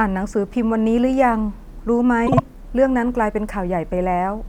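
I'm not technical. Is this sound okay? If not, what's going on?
No. From 2.27 to 2.40 s there is a case of frames out of order. Two short chunks of the speech, each about 52 ms long, play swapped. This gives a brief garbled flutter. Nothing is missing.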